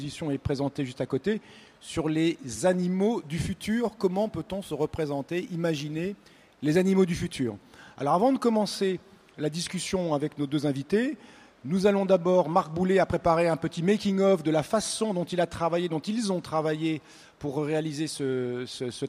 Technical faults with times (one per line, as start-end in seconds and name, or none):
3.49-6.92 crude rate conversion